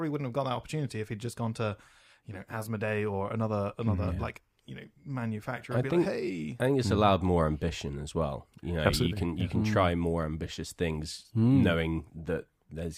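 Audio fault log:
No technical faults can be heard anywhere in the recording; the signal stays steady and intact throughout.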